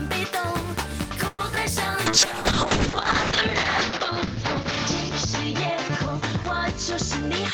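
A call audio freeze interrupts the audio from 1.27 to 1.41 s. The last sound is stretched into a fading buzz or hiss for about 114 ms before the audio resumes where it left off. Nothing appears to be lost; instead, a gap has been inserted, pushing everything after it roughly 114 ms later. The likely cause is packets stalling in transit long enough for the jitter buffer to run dry, so the receiver synthesised filler until delivery resumed. Shortly after, at 1.55 to 1.58 s, there is a short concealed packet loss. About 20 ms of audio never reached the decoder in time. The receiver covered roughly 14 ms of that hole by extrapolating the preceding sound and then crossfading back into the real signal, which leaves a brief smear or wobble at that point. From 2.07 s to the end there is a call bitrate drop. The encoder falls from 32 kbps to 6 kbps and stays at the lowest rate for about 1 s. Audio bandwidth narrows from 20 kHz to 8 kHz, so the top end disappears. 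The coarser coding also makes the remainder sound rough and watery. This points to the sender's bandwidth estimate collapsing and the codec being throttled in response, with no full recovery before the clip ends.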